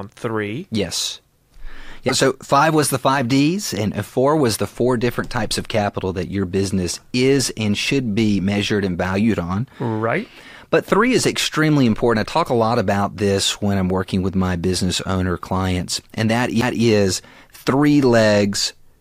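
At 2.08 to 2.11 s, just before "so five was the", the speech briefly jumps ahead. This is likely a broken MP3 bit reservoir after dropped frames.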